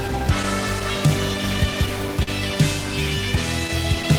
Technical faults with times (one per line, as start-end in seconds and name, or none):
0.00-4.18 clock drift between sender and receiver
2.23-2.29 short stall from a late packet